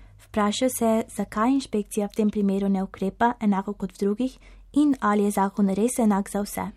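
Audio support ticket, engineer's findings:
No transmission or processing defects found in the speech signal; level, continuity and timing all hold steady across the recording.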